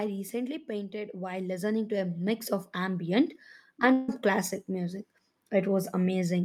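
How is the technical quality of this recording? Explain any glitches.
The recording has three glitches, all level or continuity problems.

From 0.05 to 0.72 s there's automatic gain falling. The gain control decided the input was too hot and eased its gain down by about 3 dB, so the speech starts loud and then sinks along with its background.

Overlapping that, from 0.65 to 3.11 s, automatic gain rising takes over. The control now judged things too quiet and pushed the gain up by about 10 dB over a couple of seconds, so voice and background noise swell together.

At 3.92 to 4.09 s, roughly 0.16 s, the last bit of sound gets stretched into a fading buzz or hiss. Then the speech picks up again with that stretch simply gone. That's likely a long network dropout, with the receiver papering over the gap rather than going silent.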